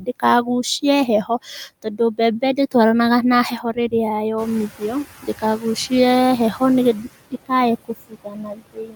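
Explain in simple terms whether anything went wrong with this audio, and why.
Noise suppressor artifacts run through the whole clip. The suppressor turns down every frequency band it judges to be steady background noise, updating many times a second. The background noise therefore sinks in the gaps and comes back up under the talking.

Speech cut by the noise suppressor happens at 0.0 to 0.48 s, 1.83 to 2.75 s, 3.51 to 3.93 s, 4.46 to 5.92 s, 6.94 to 7.51 s and 7.85 to 8.96 s. In each stretch, the suppressor mistook quieter parts of the speech, such as soft consonants and word endings, for noise and turned them down with the background. Those bits sound swallowed or faint. The cuts grow deeper in the later stretches.

The noise suppressor catching up shows at 4.37 to 4.67 s. The room noise in the recording gets noticeably louder around 4.5 s, which is a real change in the room and not a fault. 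The suppressor's picture of the background lagged behind that jump, so the louder noise came through with less reduction at first. Over about 0.3 s it adjusted and pushed the noise back down.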